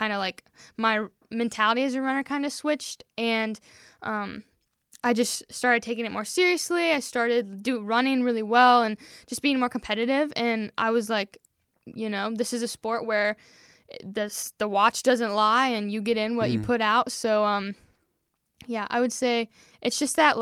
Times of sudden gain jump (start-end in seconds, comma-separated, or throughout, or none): 5.06-5.35